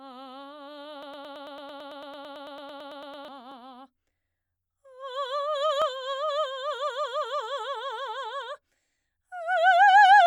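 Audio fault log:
1.03 to 3.28 s, broken-record loop: a fragment of the music about 0.11 s long repeats exactly, back to back, some twenty times, with a rhythmic stutter in place of the passage that should have played. The likely cause is a stalled player or stream resending its last held fragment.
3.52 s, repeated buffer: a single tiny click or blip where a sliver of about 2.7 ms plays twice in a row with a hard join, which fits a 128-sample buffer being replayed once when fresh audio arrived late. Almost nothing is lost.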